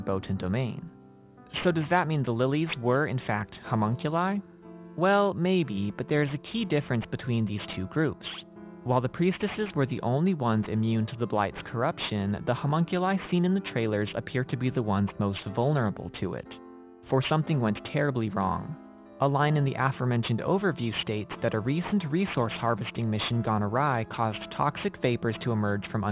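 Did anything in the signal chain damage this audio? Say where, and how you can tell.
Yes. Aliasing runs across the whole clip and comes from sample-rate conversion. Upper content folds back at 4 kHz into gritty, metallic, unrelated tones roughly 20 dB below the signal, which fits a drop to 8 kHz without an anti-aliasing filter.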